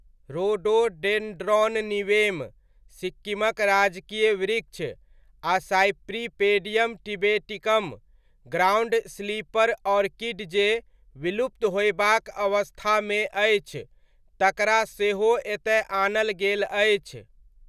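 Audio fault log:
No technical faults can be heard anywhere in the speech recording, and the signal holds steady from beginning to end.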